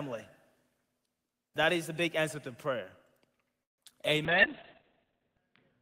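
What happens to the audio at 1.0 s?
Nothing goes wrong at 1.0 s; the speech carries on intact through that moment, with no dropout, click or distortion to be heard.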